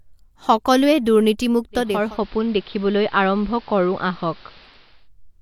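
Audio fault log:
1.71–5.10 s, digital radio blending to analogue: the receiver loses its digital stream and cross-fades over 475 ms to the station's AM broadcast. The level drops about 1 dB, and hiss sits roughly 25 dB beneath the speech until it blends back.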